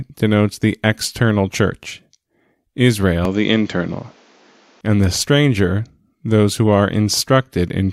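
From 3.25 to 4.81 s the speech turns duller, losing everything above 7.6 kHz, with a faint new noise floor, likely the input switched to a poorer device.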